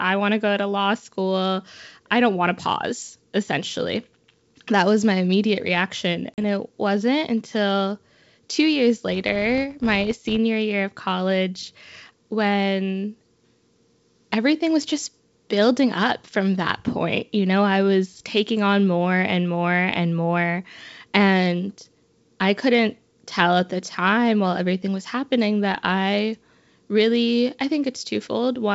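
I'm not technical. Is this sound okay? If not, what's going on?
No. Two short problems can be heard in this speech.

Packet loss on an ADPCM call, at 6.34 to 6.42 s, right after "was my immediate reaction": about 40 ms of sound, roughly a couple of packets, goes missing and is replaced by a hard-edged silent hole. This call format sends each bit of sound as a guess based on what came before, so when pieces vanish the receiving end loses track. The speech comes back slightly rough, then settles within a few hundredths of a second.

Filter restarted on every block, from 9.10 to 10.39 s, between "wasn't until two years" and "year of college when": a processing step that should run smoothly instead forgets everything at the start of each short chunk of audio and begins again from silence. Each restart leaves a tiny tick, and these ticks repeat about 94 times a second, which fits 512-sample chunks. 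Together they form a buzz that gets louder and softer along with the speech.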